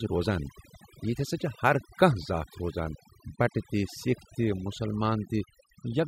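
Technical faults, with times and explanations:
Throughout: overdone noise removal. A noise reduction process set far too aggressively is muting individual frequency bands whenever their level sits near its noise estimate, and the softer parts of the speech are removed along with the noise. The background drops and breaks up into twinkling specks. On a spectrogram the gaps look clean but sprinkled with isolated bright dots, and the harmonics are patchy and broken at their edges.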